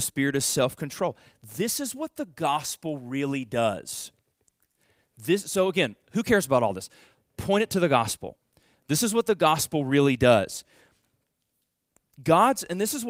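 No technical faults are audible.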